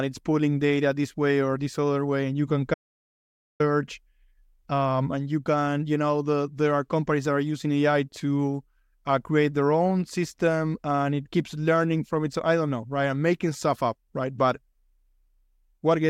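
An audio dropout to silence runs from 2.74 to 3.60 s, removing about 0.86 s of the speech. The speech stops abruptly mid-flow and returns just as suddenly, and the gap in between is silent with no room tone or background hiss. The likely cause is a momentary loss of the input signal, such as a disconnected device, a failed link or a brief mute, while the recording carried on writing silence. Whatever was spoken in that stretch is gone.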